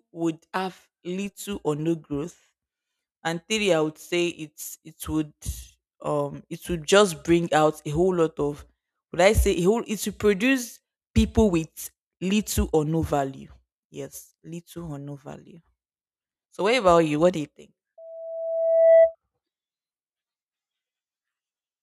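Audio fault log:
17.98–19.15 s, loudspeaker feedback squeal: a 657 Hz tone swells over about a second to roughly 10 dB above the speech, as the microphone re-amplifies its own loudspeaker.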